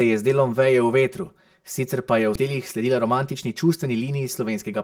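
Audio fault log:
Throughout: channel delay (comb filtering). One channel runs around 5 ms behind the other, and summing them cancels shared sound at evenly spaced frequencies, starting near 100 Hz. The speech sounds hollow and phasey. The notches stay fixed, unlike the moving sweep of a flanger or a varying network fault.
2.35–2.37 s: skip ahead. About 0.4 s of speech is missing, and the audio on either side is joined almost directly with no silence or filler. A queued stretch of later audio was played while the earlier part was discarded. It differs from a dropout because nothing is muted.
2.44–4.02 s: jitter buffer speed-up. The speech plays at about 108% speed with unchanged pitch and sounds hurried. Short pitch-period pieces, about 150 ms in total, were trimmed repeatedly to drain excess buffered delay. It differs from a resampling error because the pitch does not rise.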